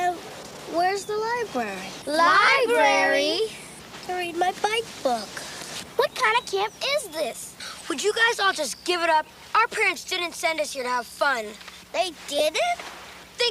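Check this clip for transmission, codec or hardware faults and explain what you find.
One fault occurs three times: lost LE Audio frames, at 2.46 to 2.48 s, at 7.80 s, and at 12.39 to 12.41 s. Bluetooth LE Audio frames failed to arrive, and the LC3 decoder filled each gap by reusing the last good spectrum with randomised signs. The missing spans are 22.5 ms, 7.5 ms and 15 ms, which suggests losses of three, one and two 7.5 ms frames. Each gap is heard as a short noisy smear in place of the original sound.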